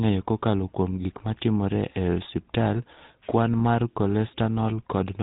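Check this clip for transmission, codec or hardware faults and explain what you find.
A buzzy, gravelly roughness runs through the whole speech recording, the signature of the GSM full-rate codec. Everything above 4 kHz is missing, so the sound is narrow and muffled, and the grit is plainly audible throughout. The codec rebuilds speech from a model of the vocal tract fed by a sparse, evenly spaced pulse train that keeps only a third of the excitation samples, which produces that coarse buzz. The amount of damage fits a 13 kbps link.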